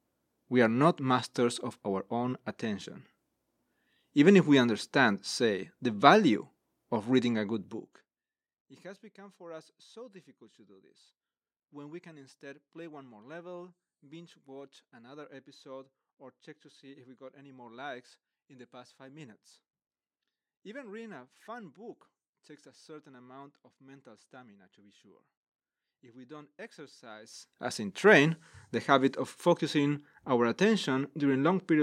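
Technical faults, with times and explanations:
Nothing technical goes wrong in this speech recording, so there's nothing to flag here.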